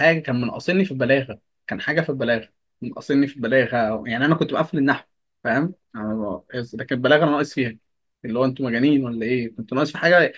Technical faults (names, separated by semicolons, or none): none